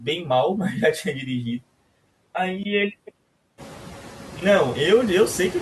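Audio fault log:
throughout: noise suppressor artifacts. The suppressor cuts bands it judges to be steady noise by about 18 dB, frame by frame. The background drops away between phrases and comes back under speech.
2.63–4.42 s: input switched to a poorer device, likely. A 20 ms gap opens at the switch, then the band narrows, so the voice turns dull and boxy with faint new background noise well below it. Full bandwidth returns at 4.42 s, with loudness unchanged.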